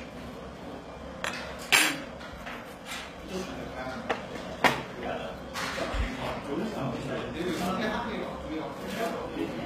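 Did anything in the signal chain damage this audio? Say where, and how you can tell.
Yes, at the codec stage, throughout the clip. The top end sounds bright but wrong: high-frequency detail comes out gritty and metallic, with a plainly audible synthetic sheen, and nothing reaches above about 14.9 kHz. This is likely HE-AAC compression at a very low bitrate, consistent with roughly 20 kbps. Only the lower spectrum is actually coded. The treble is rebuilt by copying lower bands upward under a coarse envelope, so its harmonics no longer line up with the real ones.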